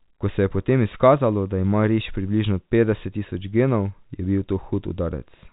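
Nothing stood out on listening to this speech recording, which is carried over telephone-band coding with nothing above about 3.8 kHz.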